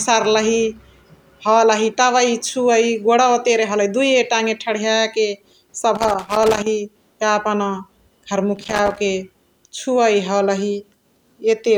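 An irregular burst of crackle and scratching breaks up the speech from 5.95 to 6.66 s and again from 8.56 to 8.98 s: loose connector crackle, a worn or dirty contact rapidly making and breaking.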